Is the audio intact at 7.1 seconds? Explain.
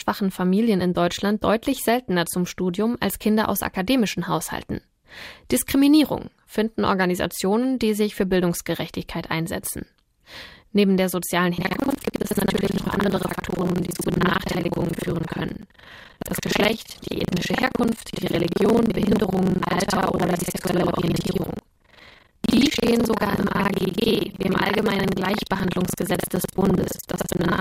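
Yes, the speech at 7.1 seconds plays through cleanly, with no dropout, click, distortion or other fault audible at that moment.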